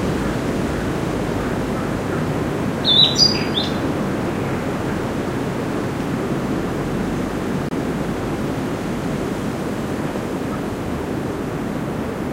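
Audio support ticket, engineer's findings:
Bluetooth dropout, likely: 23 ms silent hole at 7.69–7.72 s, consistent with one lost packet; flat waveform, full-band vertical gap on spectrogram, audio resumes further along with no catch-up.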